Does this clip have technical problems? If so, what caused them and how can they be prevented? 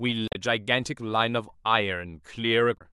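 Yes. Damaged data in a compressed stream: the decoder receives corrupted bytes, misreads or rejects the affected frames, loses sync and hunts for the next valid frame header. In this speech clip that produces two brief glitches, from 0.28 to 0.35 s and from 2.74 to 2.81 s, where the audio breaks up instead of continuing cleanly. Verifying files with checksums and using transport with error detection or retransmission prevents this.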